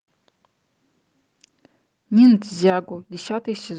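At 2.7 s the speech level falls abruptly by about 9 dB, voice and background together, and stays there. This is likely a microphone volume stepped down by the call software's automatic gain handling, cutting the input gain in one step.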